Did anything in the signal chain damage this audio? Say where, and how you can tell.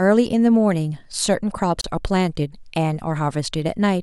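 Yes. A gap at a join of encoded pieces opens at 1.81 s and lasts about 31 ms, to 1.84 s, a short hole of silence in otherwise continuous speech, after which the sound resumes exactly where it left off. This is a codec-stage fault: the audio was encoded in roughly 2-second pieces and concatenated untrimmed, so the encoder's start-up delay and last-frame padding remain at the seam. The edges are smeared by the codec.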